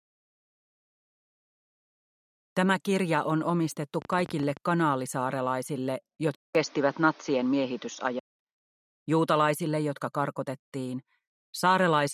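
Likely interference or a faulty connection put a train of clicks from 4.02 to 4.58 s: about ten irregular pops, roughly 20 per second, peaking about 5 dB above the sound. At 6.35 s the input switched to a poorer device, likely a narrower microphone. After a 200 ms silence the sound turns dull, with a level shift of about 5 dB, and added noise about 30 dB down, until it clears at 8.39 s.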